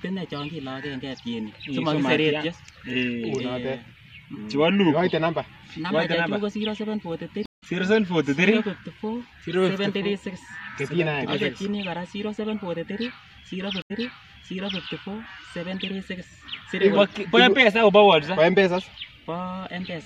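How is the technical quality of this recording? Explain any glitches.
Two stream reconnects interrupt the recording. At 7.46 to 7.63 s the stream stalls for 164 ms, and when it resumes the audio has jumped ahead by about 0.15 s. At 13.82 to 14.81 s a silence of 80 ms is followed by a jump back of 0.91 s, so that stretch plays twice, most likely because the server resent a burst of buffered audio.

In both cases the connection dropped, the player reconnected, and a fresh decoder picked up mid-stream. Its first frame or two come in muted or fading in. The jump in position and the soft restart set it apart from a plain dropout, which leaves a gap but continues from exactly where the sound stopped.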